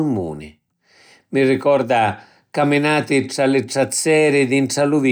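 No technical faults can be heard at any point in the recording, and the signal holds together without interruption.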